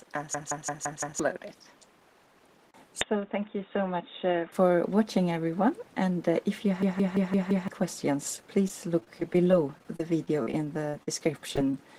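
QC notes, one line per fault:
0.34–1.20 s and 6.83–7.68 s, system hang loop: both times a 170.67 ms slice repeats exactly five times at 5.86 Hz, giving a machine-gun stutter. The driver froze while the hardware kept replaying one ring buffer, which fits 8192 samples, and roughly a second of audio is lost each time.
3.01–4.52 s, input switched to a poorer device: the sound turns dull and boxy with nothing above 3.8 kHz, drops about 5 dB and carries new background noise about 30 dB below the signal, then clears again. There is no silence at either switch. The likely cause is the recording input changing to a narrower-band device and back.
8.36–11.10 s, repeated packet loss (robotic sound): seventeen holes, the longest 41 ms, are patched by extending the preceding sound, covering about 10% of the stretch. Because one gap follows closely on the next, the audio turns choppy, with fragments missing.
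11.49 s, 11.56–11.58 s and 11.72–11.74 s, short concealed packet loss: each hole is about 10 ms of missing audio. The receiver extends the last sound and blends back into the real signal, so each one is heard as a brief smear or wobble.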